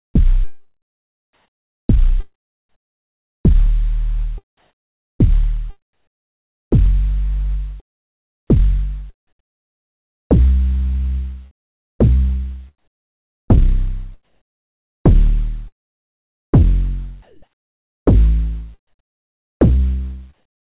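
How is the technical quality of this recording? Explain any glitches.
The recording has two glitches, both tied to discontinuous transmission on a call link whose band stops at 4 kHz, consistent with narrowband G.711-style telephone coding.

Comfort noise in place of the background appears from 1.33 to 12.19 s, 11.51 to 11.99 s, 14.23 to 18.06 s and 18.87 to 20.70 s. During quiet stretches the sender likely stopped transmitting, and the receiver filled the gaps with synthetic noise. The real ambience turns into a flat, featureless hiss; at 11.5 s it drops about 8 dB, sitting roughly 69 dB below the loudest sound. On a spectrogram these stretches look like smooth, uniform bands without texture.

Onset clipped by the voice detector occurs from 1.86 to 1.89 s. The detector was likely slow to register that sound had resumed, so about 30 ms of the attack was replaced by comfort noise and the sound starts abruptly. 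On the waveform it shows as a sudden vertical edge with no gradual rise.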